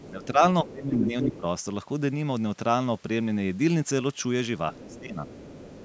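Speech over a call link, with two recurring faults clustered at the start and end. A second voice, the other side's voice leaking through, sits underneath the talker at 0.0–0.27 s, 4.73–5.0 s and from 5.25 s to the end, about 20 dB down. At 0.99–1.38 s it rises to nearly the talker's level. On a spectrogram this appears as a separate set of harmonic striations overlapping the main voice, all cut off at 8 kHz like the rest of the call audio. The likely cause is a loudspeaker feeding the microphone, with the echo canceller leaving residue behind. Overlapping those same stretches, at 0.1–0.42 s, 0.63–1.44 s and 4.72–5.21 s, the talker's own voice ducks by around 10 to 15 dB in patches. This is speech suppressed in double talk, likely the canceller turning everything down while both sides spoke. The waveform shows the envelope sagging in those windows.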